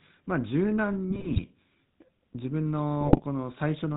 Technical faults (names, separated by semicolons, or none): GSM full-rate codec; GSM bit errors